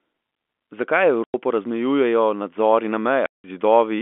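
Packet loss filled with silence: the receiver lost audio and played silence instead. At 1.24 s a 100 ms hole cuts in before "razmejujejo nadzori", and at 3.26 s a 180 ms hole follows it. Both have hard edges, and the lengths fit 20 ms packets.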